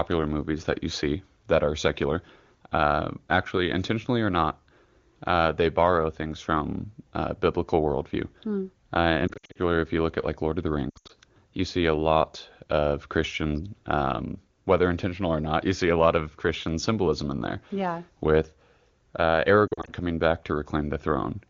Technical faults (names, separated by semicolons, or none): lost AMR speech frames